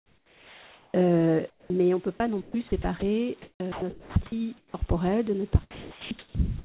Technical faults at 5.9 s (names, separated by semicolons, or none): sound chopped by the voice detector